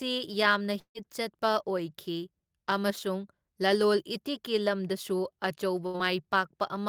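From 0.79 to 0.98 s the speech breaks into a short continuation of the preceding sound that fades away, then about 80 ms of silence before the speech picks up again with roughly 160 ms of it gone. This is likely a long network dropout, with nothing arriving for a stretch. The drop to true silence after the concealment runs out is what separates it from a shorter burst of packet loss.

At 5.87 to 5.97 s there is a burst of packet loss. About 80 ms of speech is missing. For roughly 70 ms the receiver stretches the last sound, which becomes a held, dimming buzz or hiss. The speech then resumes further along, with the gap simply skipped. Unlike the earlier dropout, this gap is shorter.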